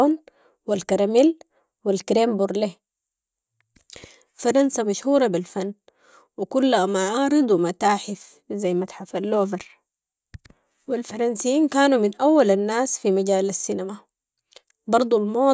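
Nothing in this recording stands out as a technical fault, so there's really nothing to walk through here.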